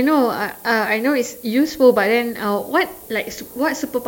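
A steady, thin hiss sits under the speech from start to finish, climbing sharply toward the top of the band and only around 20 dB below it. This is low bit depth with noise shaping: 8-bit quantisation, with rounding error pushed upward.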